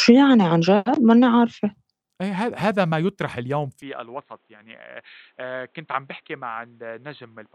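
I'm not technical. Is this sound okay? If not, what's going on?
No, not quite. At about 3.82 seconds the speech suddenly turns duller and boxier and gets noticeably quieter, with a faint new background noise, and it stays that way to the end. There's no gap at the changeover. That's the classic sign of an input switched to a poorer device, likely a different mic or a headset's call mode. That kind of input cuts off everything above about 4.1 kHz, so the crisp, airy part of the sound disappears.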